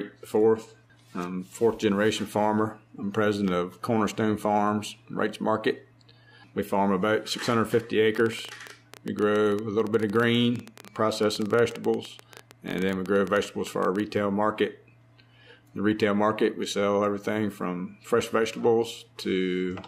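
A train of clicks runs through the audio from about 8.15 s to 14.01 s: roughly seventy similar pops at around 11.8 per second, unevenly spaced, peaking some 10 dB above the sound. That's likely interference from nearby gear or a faulty connection or power supply.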